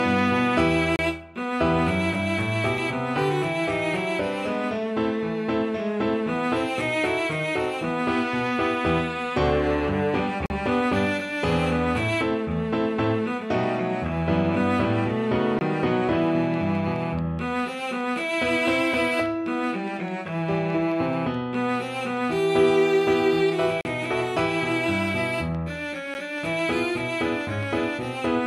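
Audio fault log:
0.96 to 26.14 s, block of digital silence: the audio drops to silence and returns with no fade at 0.96 to 0.99 s (30 ms), 2.78 s (about 4 ms), 10.46 to 10.50 s (40 ms), 15.59 to 15.61 s (20 ms), 23.81 to 23.85 s (40 ms) and 26.14 s (10 ms). The shortest gaps sound like ticks, and the 30 to 40 ms ones are audible holes. This pattern fits output buffers that were not filled in time.
16.54 to 28.26 s, train of clicks: roughly 50 near-identical clicks arrive at a regular 4.78 per second, each about as loud as the surrounding audio. They are heard as steady ticking over the sound and in its pauses. The even spacing and consistent shape point to a periodic external pulse, likely electrical interference or a faulty connection or power supply.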